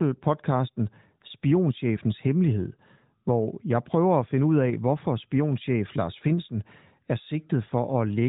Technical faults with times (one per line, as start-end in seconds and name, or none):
none